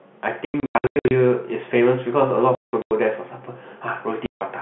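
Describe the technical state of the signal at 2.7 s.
At 2.7 s the stream is inside a stretch of packet loss filled with silence: between 2.55 and 2.91 s, 270 ms of audio went missing and the receiver inserted silence. The gaps, the longest 180 ms, break the speech with hard edges, consistent with 30 ms packets.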